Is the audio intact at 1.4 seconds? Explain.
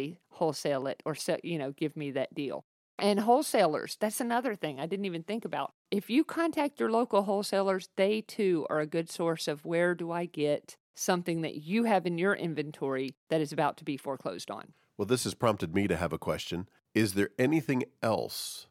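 Yes, at 1.4 seconds the speech runs intact, with no audible fault at that moment.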